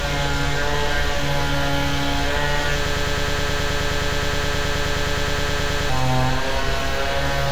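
A broken-record loop runs from 2.86 s to 5.89 s. A fragment about 105 ms long repeats exactly, back to back, 29 times, producing a rapid mechanical stutter near 9.5 repeats per second for roughly three seconds. The likely cause is a stalled player, encoder or stream that kept outputting the last chunk it held instead of fresh material. Whatever sound belonged in that stretch is missing, replaced entirely by the repeating fragment.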